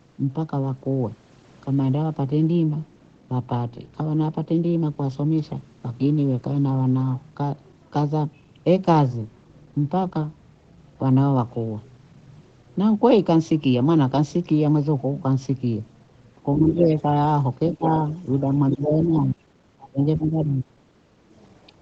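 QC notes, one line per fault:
16.69–17.02 s, 18.09–18.20 s, 18.71–18.86 s: other side's voice leaking through. A second voice is heard under the speech, loud at first (only about 5 dB below it), then faint, then about 10 dB down. The likely cause is loudspeaker echo that the echo canceller left in.
17.75–17.86 s, 18.41–19.43 s, 19.78–20.81 s: speech suppressed in double talk. The speech dips by about 20, 15 and 25 dB in turn, briefly at first, then for up to about a second. The likely cause is the echo canceller turning down this side's speech along with the loudspeaker echo while they overlap.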